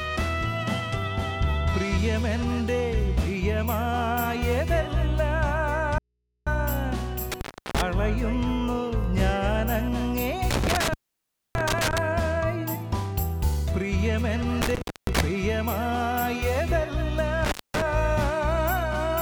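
At 5.98 s the sound cuts out abruptly and returns at 6.47 s, an audio dropout to a faint residue lasting about 482 ms. The gap holds only mains hum, roughly 50 dB below the signal. The likely cause is a brief loss of the source upstream while the rest of the chain stayed powered and open, which lets the input's hum through.

From 7.32 s onward, four intermittent contact faults follow, consistent with a loose cable or plug briefly opening the line. The line is open for 336 ms between 7.32 and 7.82 s, for 615 ms between 10.51 and 11.98 s, for 326 ms between 14.62 and 15.20 s, and for 224 ms between 17.45 and 17.82 s. Each break cuts the sound with crackle at its edges, and each gap holds faint hiss.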